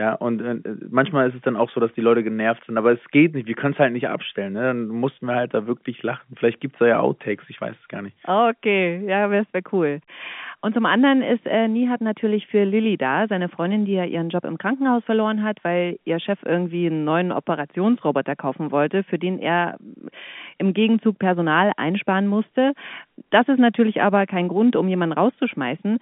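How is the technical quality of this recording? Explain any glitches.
No glitches can be heard anywhere in this speech recording. It comes through G.711 telephone coding, so the sound is confined to the phone line's band of roughly 150 Hz to 3.5 kHz with nothing above about 3.7 kHz, and at most a faint trace of the coding's own grain.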